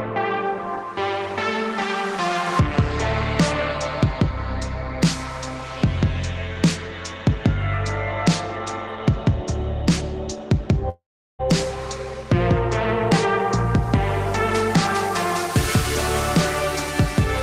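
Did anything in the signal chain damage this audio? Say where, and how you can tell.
Yes. A long network dropout runs from 10.89 to 11.41 s. At 10.89 s the last sound is stretched into a decaying buzz, after which about 370 ms of silence follows before the audio resumes at 11.41 s with roughly half a second of material gone. That pattern points to the network stage: packets likely stopped arriving, and the receiver's loss concealment repeated the final fragment until it faded out.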